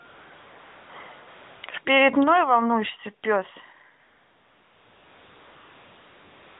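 AMR comfort noise replaces the real background at 0.08–0.26 s, 0.28–0.30 s, 0.34–0.90 s, 1.28–1.64 s, 1.66–1.68 s and from 4.0 s to the end. Speech frames stop during these spans, and the receiver fills each one with a steady, smooth synthetic hiss that switches in and out.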